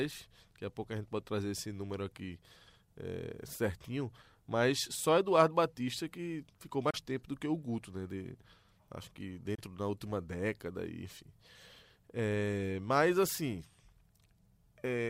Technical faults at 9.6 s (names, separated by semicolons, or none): Bluetooth dropout